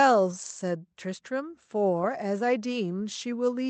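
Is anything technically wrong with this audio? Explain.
No, nothing is technically wrong.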